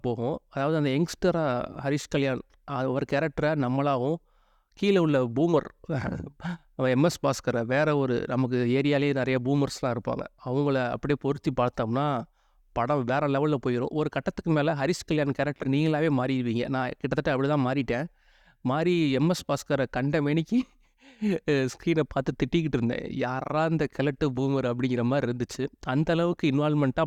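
No technical faults are audible in the recording.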